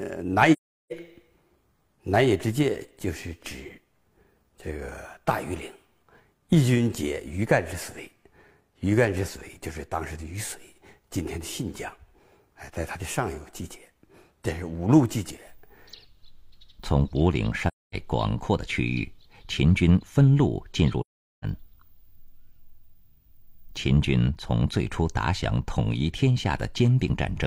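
AAC frame loss with muting at 0.52, 17.68 and 21.00 s: runs of lost frames decoded as silence, leaving soft-edged holes of about 0.38, 0.26 and 0.43 s.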